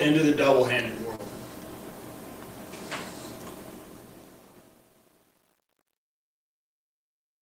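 A brief smear interrupts the sound at 1.15 to 1.21 s, where the audio seems to hang on itself and then slide back in. This is short concealed packet loss: about 40 ms never arrived in time, and the receiver covered roughly 32 ms of the gap by extending the preceding sound before blending back into the real signal. A second, shorter instance at 5.65 to 5.68 s replaces a 20 ms hole with about 19 ms of synthesised continuation, heard as a quick wobble.

From 3.6 s to the end, the fade-out turns grainy instead of thinning cleanly. From 4.04 s onward the grit in the tail is at its worst. This is truncation distortion on a fade: the gain stage discards the low-order bits without dither, in a way that fits a path keeping only about 9 bits. As the level drops toward the smallest step, the waveform collapses into a few coarse square steps.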